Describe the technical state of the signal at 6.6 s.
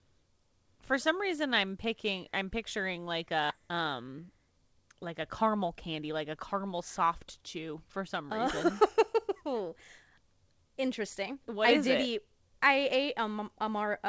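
The speech sounds slightly hurried at unchanged pitch, about 7% fast, from 3.6 to 6.7 s, ending just before "soft chew". This is a jitter buffer speed-up: the receiver trimmed short pitch-period slices, roughly 200 ms in total, to drain excess buffered audio.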